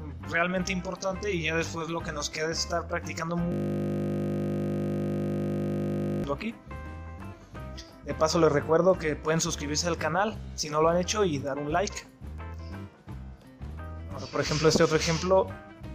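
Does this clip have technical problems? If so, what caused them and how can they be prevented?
Yes. From 3.52 to 6.24 s a system hang loop replays one 20 ms slice of sound over a hundred times, a steady 50 Hz buzz. Unlike underrun dropouts, there are no gaps, only identical repeats. Prevent it with driver watchdogs that mute the output when the audio thread stalls.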